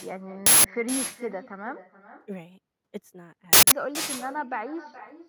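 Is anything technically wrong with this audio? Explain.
Yes, two things. Throughout the speech there's echo with no canceller: a far-end loudspeaker feeds the mic, so every phrase returns around 400 ms later, about 16 dB down and thin. There are also two uninitialised buffer bursts, at 0.46–0.65 s and 3.53–3.72 s. Stale memory played as audio gives harsh, loud digital noise lasting about 186 ms, which fits an 8192-sample block.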